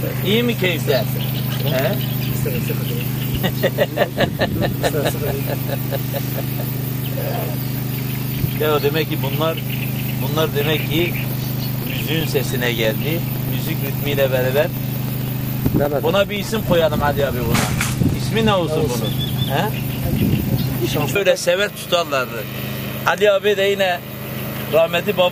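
From 10.42 to 18.23 s, periodic USB or driver dropouts occur: something blocks the audio path every 64 ms, and each time a couple of milliseconds are replaced by silence. The result is a steady, rapid ticking, about 15 per second, riding on the sound.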